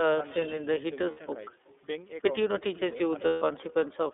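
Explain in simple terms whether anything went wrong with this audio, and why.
Every phrase is followed, a bit under half a second later, by a faint, hollow repeat of itself. That is echo with no canceller: the far end played the call through a loudspeaker, its microphone caught it, and nothing removed it before it returned down the line.

The speech sounds thin, boxy and slightly rough or synthetic throughout, with no deep bass and no crisp top end. That is the iLBC codec, a phone-line codec that squeezes the sound into a narrow band and rebuilds it in 30 ms chunks, leaving audible coding damage.

At 1.11 to 1.18 s, and again at 3.26 to 3.42 s, the sound briefly turns into a held, buzzy or breathy smear before snapping back. These are lost iLBC frames: packets went missing, about 60 ms and then 150 ms worth, and the decoder filled the gaps by repeating the last bit of sound.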